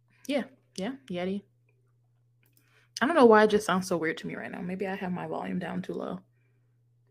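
No technical faults are heard at any point in the recording.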